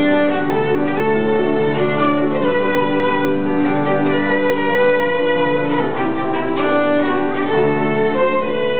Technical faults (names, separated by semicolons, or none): chunks out of order